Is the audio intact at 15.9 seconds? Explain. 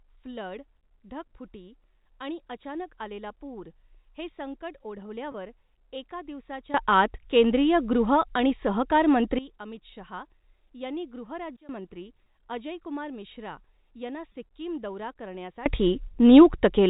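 No, at 15.9 seconds you're inside a sudden gain jump that hits at 15.66 s and holds to the end of the clip at 16.89 s. The level leaps by about 21 dB from one sample to the next, likely a gain setting or bit shift applied with no ramp. The speech and the background noise of the telephone-band audio jump up together, so it sounds like someone cranked the fader instantly.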